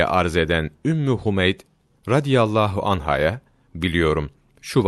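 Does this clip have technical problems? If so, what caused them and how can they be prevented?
No, there are no technical problems in this speech.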